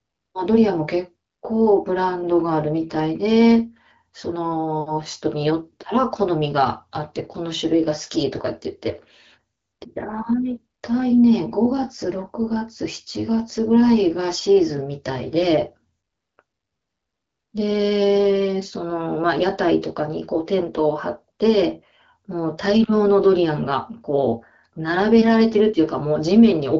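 No technical faults are audible.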